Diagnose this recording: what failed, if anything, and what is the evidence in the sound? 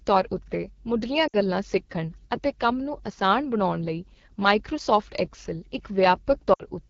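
The codec stage failed. The whole speech track carries AMR wideband (HD Voice) codec damage, and it is plainly audible. The speech sounds rough and raspy from start to finish. The top band above 6.4 kHz is filled with shaped noise, not real detail. That grain fits one of the two lowest AMR-WB modes, probably 8.85 kbit/s. At that rate the pulse-driven vocal tract model has too few bits to reproduce the speech cleanly.

The network or radio link also failed, causing lost AMR speech frames. There are two events, at 1.27 to 1.35 s and at 6.53 to 6.63 s. Each gap is about 60 ms, which fits three 20 ms frames. In each gap the speech sags to near silence, then recovers roughly. Corrupted frames failed their checksum. The decoder then repeated the last good pitch and vocal tract settings with falling gain.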